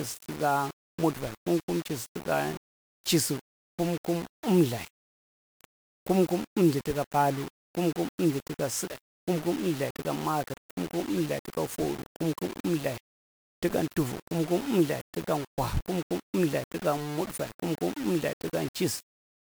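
From the first moment to the end, the speech carries a grainy, fizzy distortion that rides along with it, roughening every syllable and turning the quieter tails harsh and sputtery before they drop out. That's most likely low bit depth without dither: the audio was rounded to very few levels, which fits roughly 5 bits, so the error tracks the signal instead of sitting as steady hiss, landing only about 15 dB under the speech.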